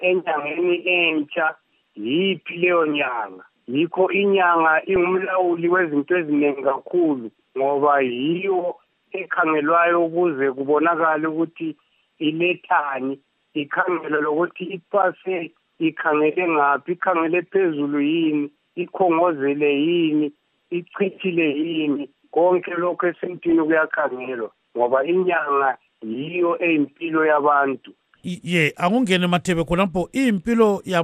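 From start to finish the sound is dull and granular, with a gurgling edge. This is MP2 compression, likely at a low rate around 80 kbps. Too few bits reach the 32 sub-bands. Upper bands switch off and flicker, and the rest are coarsely quantised.

DAB burbling appears from 4.94 to 5.07 s and again at 23.50 s. Bit errors from weak reception slip past error correction into the audio frames. Wrong samples give short blips of noise in single sub-bands, and wrong scale factors make sub-bands jump in level. The second burst sounds denser, suggesting a higher error rate.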